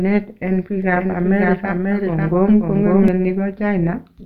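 Overlap-add ripple runs through the whole speech clip. The audio was split into windowed frames and rejoined with an overlap whose gains don't add up to a steady level, so loudness swings by about 6 dB once per frame. At a frame rate of around 200 Hz this sounds like a metallic buzz with extra tones around the voice laid over everything rather than a slow pulsing.

A doubled audio track appears from 0.82 s to 3.08 s. A second full-band copy of the speech follows roughly half a second behind and is about as loud as the original, so syllables are heard twice in a dry, uncoloured echo. It switches on and off abruptly at those edges. This likely comes from the signal being captured a second time through a slower path.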